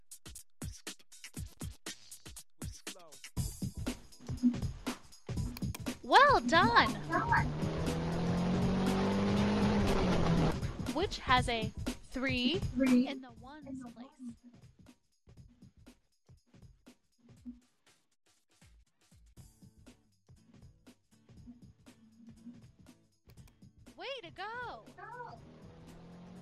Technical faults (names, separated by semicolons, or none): chunks out of order; zipper noise